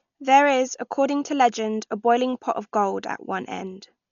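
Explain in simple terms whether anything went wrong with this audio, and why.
Dolby Digital compression, heard across the whole clip, is the likely cause of the damage here. The speech sounds dull and muffled, because nothing above about 6.9 kHz survives, so the crisp, airy top of the sound is simply gone. With so little data to work with, the encoder drops fine detail and the decoder fills the gaps with soft noise, which leaves a rough, fluttering haze around the voiced sounds.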